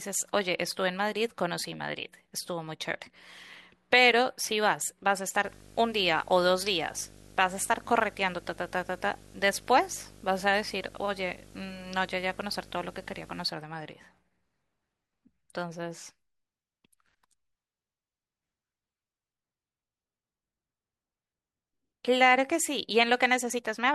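From 5.44 s to 13.44 s a coarse buzz sits under the speech, pitched at 50 Hz with a gritty hash riding above it and a thin, very high whine at 15.6 kHz, all roughly 20 dB below the speech. This is video or display buzz: a screen or video cable is coupling into the audio path, so the picture's 50 Hz field rate and its line-scanning rate leak in as audible interference.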